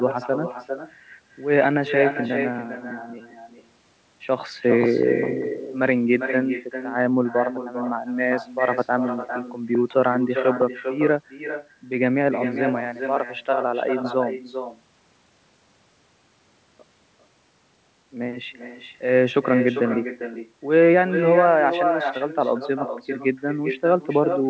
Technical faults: echo with no canceller

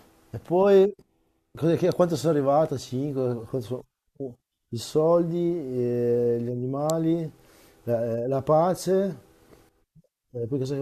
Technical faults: electrical switching spike

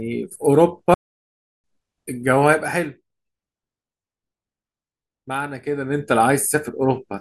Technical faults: playback stall

